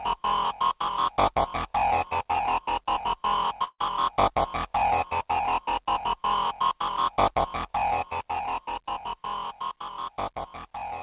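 The audio has come through a WebRTC call path using G.711 A-law, so nothing is heard above 4 kHz. There is a burst of packet loss from 3.64 to 3.8 s. Packets failed to arrive in time for playback. The receiver covered the gap by carrying the last sound forward and letting it fade. That concealment fills about 140 ms and ends in roughly 40 ms of silence. When the audio returns, 140 ms of the original is gone. There are also two blocks of digital silence, at 6.97 s and at 9.25 s. Each lasts 5.3 ms, which fits a 256-sample buffer. At that length the audio does not drop out audibly. It is heard as a tick or dip, because it cuts out and returns with no fade. A block of zeros like this means the output buffer was not filled in time, or a calculation produced invalid numbers.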